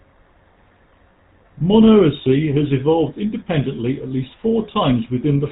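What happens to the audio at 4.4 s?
At 4.4 s the speech sounds buzzy, gravelly and dull, with nothing above 4 kHz. That is GSM full-rate codec damage, present throughout the clip. The codec rebuilds speech from a vocal-tract model driven by coarse, regularly spaced pulses, at a bitrate that fits about 13 kbit/s.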